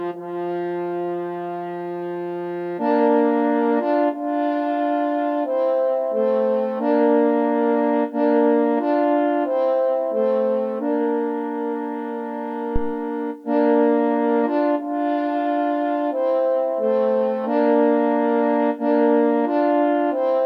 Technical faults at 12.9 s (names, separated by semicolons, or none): phantom power thump